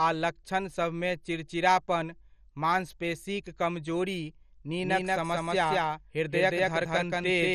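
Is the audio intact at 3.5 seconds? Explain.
No, at 3.5 seconds the speech sounds dull and gurglingly granular, with nothing above 13.2 kHz, throughout the clip. This is likely heavy MP2 compression starving and switching off its upper sub-bands, consistent with roughly 56 kbps.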